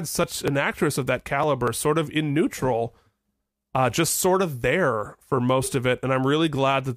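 Regular ticks every 0.24 s, from 0.24 to 1.68 s, before "sort of in neutral": periodic USB or driver dropouts skipping about 10 ms each time.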